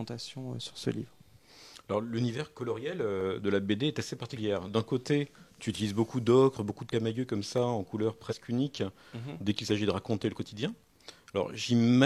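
At 3.21 s a single sharp click appears, with the same click again at 7.58 s and 9.70 s. Each is a thin vertical line across the spectrum, far too brief to take any sound away. These are likely dropped samples: a fraction of a millisecond of the stream goes missing, and the waveform leaps straight to a later value. That hard, instantaneous edge is what marks them.

The other three events are compressed frames skipped. From 4.32 to 4.38 s the audio jumps ahead by roughly a tenth of a second. From 6.88 to 6.92 s and again from 8.22 to 8.33 s it jumps by roughly half that. Whole frames went unplayed, so the sound lurches forward by a frame-sized chunk.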